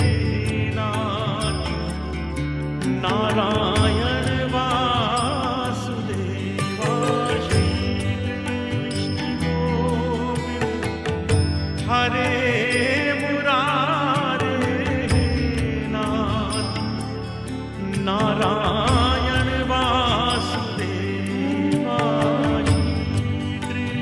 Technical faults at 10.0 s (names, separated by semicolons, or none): none